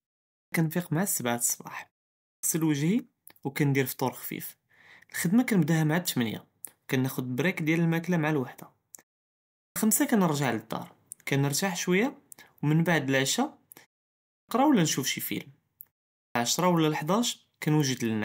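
At 0.32, 2.24, 9.58, 14.27 and 16.16 s, speech resuming after silence loses roughly 0.2 s of onset: a clipped start after a pause, as the output device wakes late. Unlike muted pauses, actual speech is cut off.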